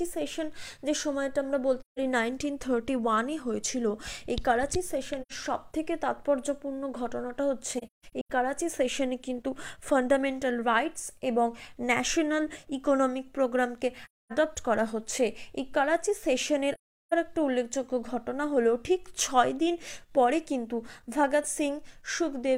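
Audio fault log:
1.80–1.99 s, 5.21–5.32 s, 7.78–8.30 s, 14.05–14.32 s, 16.74–17.13 s: AAC frame loss with muting. Holes of about 171, 85, 256 and 384 ms. The 7.78–8.30 s stretch has scattered gaps, the longest around 150 ms. The decoder zeroes the lost spectra and the overlapping windows fade the sound out and back in, leaving soft-edged silence rather than a hard-cut dropout or a repeated fragment.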